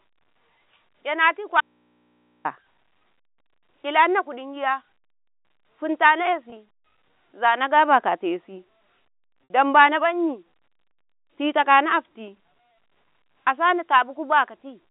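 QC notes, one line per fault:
1.61 to 2.45 s, audio dropout to a faint residue: the speech cuts out abruptly for about 0.84 s and the gap is left holding mains hum, sitting roughly 40 dB below the speech level. The break is a hard edge at both ends rather than a pause or fade, and the hum that remains points to an input that stayed open while its source was lost, likely a momentary disconnection or interrupted feed upstream of a path that kept running.
6.5 s and 9.47 to 9.5 s, packet loss with pitch repetition: at 6.5 s a 20 ms gap, one packet's worth, is bridged by repeating the last pitch period, giving a brief held, slightly buzzy tone. At 9.47 s the loss runs to 60 ms, about three packets; the repeated period fades toward silence before the speech resumes through a short cross-fade. The telephone band, roughly 200 Hz to 3.7 kHz, carries the repair sounds along with the speech.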